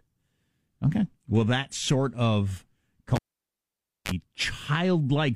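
At 3.15 s, after "that sort of", a live cable is pulled and plugged in again. A pop opens a 0.91 s near-silent gap; reinsertion brings a 35 ms burst of 50 Hz mains buzz while only the tip connects, then a second pop at 4.11 s.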